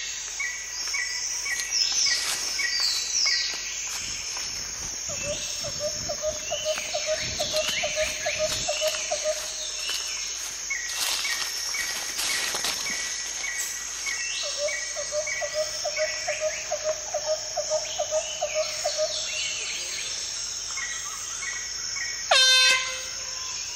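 Mains hum sits under the sound from start to finish, a steady low tone at 50 Hz that never shifts in pitch or level. It comes from the power line leaking into the signal path, as happens when a ground loop forms between connected equipment or a transformer sits close to unshielded wiring. The hum runs roughly 30 dB below the wanted signal, low enough to sit beneath it.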